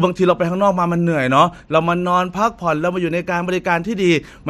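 From 0.14 to 4.48 s there's a soft rattle of clock slip clicks under the speech, a tick roughly every 70 ms. That's likely two unsynced clocks drifting about 300 ppm, slipping one sample each time.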